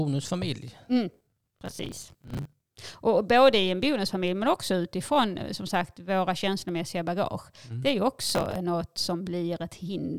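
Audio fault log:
1.14–2.71 s, processor overload crackle: a gritty, tearing crackle rides over the speech, then stops. Dozens of buffers in a row, apparently around 10 ms each, miss their deadline and replay stale audio, leaving hard-edged seams.
8.29–8.56 s, processor overload crackle: a shorter crackly burst. A dozen or so missed buffers repeat old audio before the load eases.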